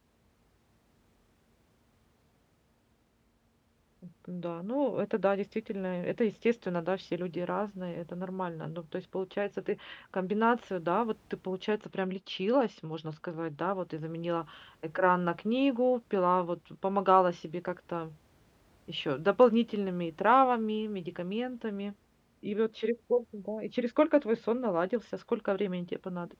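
No technical faults are audible anywhere in the recording.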